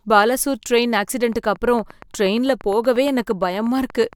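Speech carrying a train of clicks from 1.33 s to 4.14 s: about thirty near-identical ticks at a steady 8.56 per second, roughly as loud as the speech and audible in pauses too. Their even spacing separates them from random crackle. Likely interference or a faulty connection.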